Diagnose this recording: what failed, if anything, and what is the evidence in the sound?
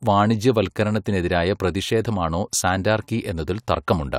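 Nothing failed: no stage from the analogue wiring and converter through buffering, processing, network, storage and playback leaves an audible mark anywhere in the speech.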